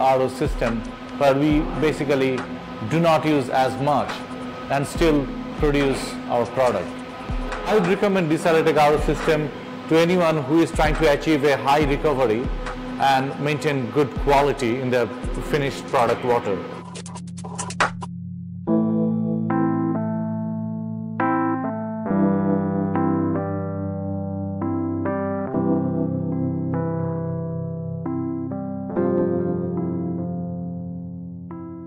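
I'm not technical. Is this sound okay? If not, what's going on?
Yes, this sound is okay, and nothing is going on with it that needs fixing.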